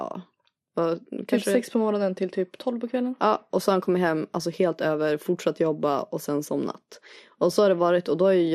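All the way through, the speech sounds dull and gurgly, with upper bands flickering out. That's likely MP2 compression, starved of bits at something like 80 kbps.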